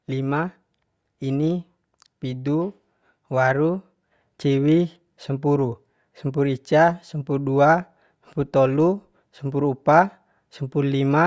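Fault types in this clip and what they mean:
No technical faults can be heard anywhere in the speech. There is nothing to list for this recording.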